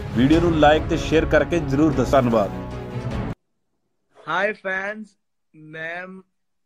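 At 2.13 s there is a brief blip from damaged data in the compressed stream. The decoder misreads the corrupted frame and loses sync for about 4 ms.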